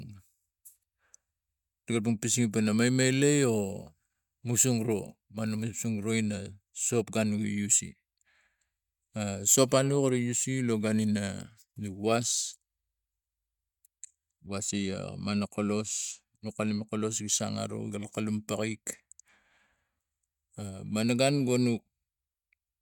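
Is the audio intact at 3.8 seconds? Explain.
Yes, the speech at 3.8 seconds is intact, with no dropout, glitch or other fault at that moment.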